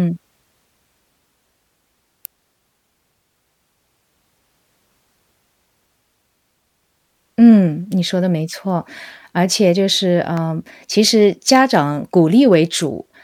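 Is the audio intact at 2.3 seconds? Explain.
No. At 2.25 s an electrical switching spike, likely from a nearby switch arcing, adds a sharp snap, visible as a single thin waveform spike and broadband spectrogram streak.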